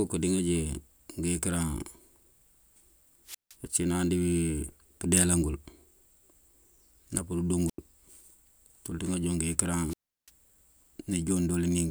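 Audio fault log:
3.25–3.55 s, 7.67–7.78 s and 9.88–10.30 s: wireless microphone squelch dropout. Hiss swells, then the speech cuts to near silence for about 163 ms, 87 ms and 345 ms before resuming. The radio link from the microphone fades until the receiver's squelch mutes its output.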